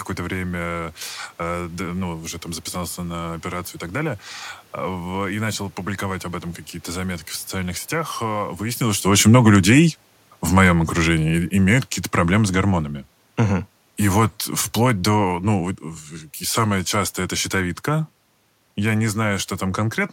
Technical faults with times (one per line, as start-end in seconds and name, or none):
10.52-12.88 automatic gain falling